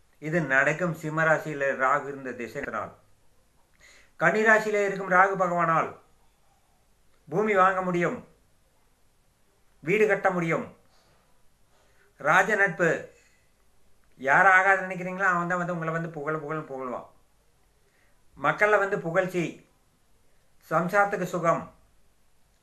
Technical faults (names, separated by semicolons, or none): damaged data in a compressed stream